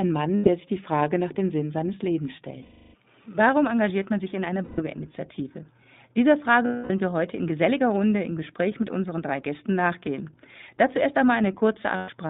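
iLBC codec damage runs through the whole speech recording: everything sits in a narrow telephone band of about 150 Hz to 3.7 kHz, and the voice has a plainly rough, synthetic edge from the codec rebuilding its excitation frame by frame, consistent with 20 ms frames and a 15.2 kbps mode. Lost iLBC frames cause five dropouts, at 0.36–0.49 s just before "sich die", 2.62–2.94 s, 4.64–4.80 s right after "man sich in einer", 6.66–6.91 s just before "wir heute in geselliger", and 11.96–12.10 s. Each is filled by the decoder repeating the last pitch cycle with added noise, heard as a held, buzzy vowel lasting 100 to 320 ms, fading in the longest, before the voice snaps back cleanly.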